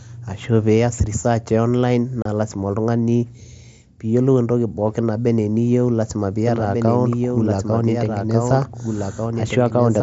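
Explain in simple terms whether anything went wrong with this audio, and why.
Two things went wrong. First, unconcealed Bluetooth headset packet loss: a few voice packets between headset and phone vanished at about 2.22 s, leaving a 30 ms gap with abrupt edges. Second, from 6.46 s to the end there is a doubled audio track, likely from the same sound being captured twice, so a quieter copy repeats everything about one and a half seconds later.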